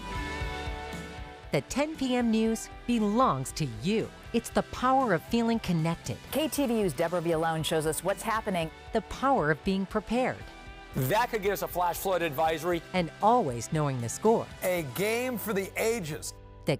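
Nothing stood out as a technical fault on listening to this audio.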